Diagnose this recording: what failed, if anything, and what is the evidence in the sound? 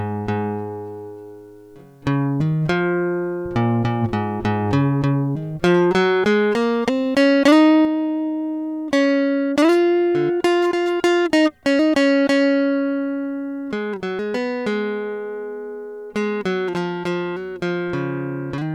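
A sudden gain jump occurs at 7.85 s: the music and its background noise drop together by about 5 dB in a single step and stay there to the end. This likely comes from a digital gain setting applied in processing without a ramp.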